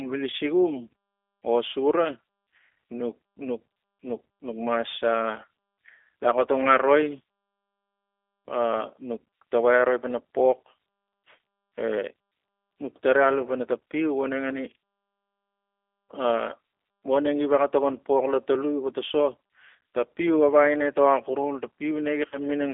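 Speech carried over a G.729 codec throughout, confined to roughly 300 Hz to 3.5 kHz. Each 10 ms frame is rebuilt from a vocal tract filter, pitch predictor and sparse pulses, leaving the voice audibly rough and synthetic, consistent with an 8 kbit/s G.729A stream. VoIP packet loss concealed by the speech codec occurs at 0.30 to 0.35 s and 22.29 to 22.41 s, each covering 30 ms of lost audio. The decoder extends the last pitch and filter at falling gain, producing a brief buzzy or noisy, fading smear, with weakened sound lingering until its prediction recovers.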